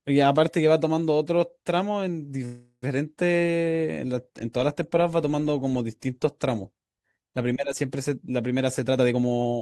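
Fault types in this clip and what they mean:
Call audio freeze: From 2.45 to 2.84 s the sound stops moving forward. The last sound is stretched into a fading buzz for about 370 ms, ending in roughly 60 ms of silence. Packets were likely held up. It then resumes where it stopped, with nothing lost but 370 ms more delay.
Jitter buffer speed-up: From 8.56 to 9.6 s the speech runs at about 128 percent speed with unchanged pitch, sounding hurried. The receiver trims many short pitch-period slices, around 300 ms in total, to shrink the delay that had built up.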